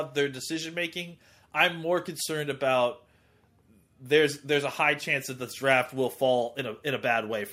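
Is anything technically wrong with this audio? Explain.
No, nothing is technically wrong with this audio.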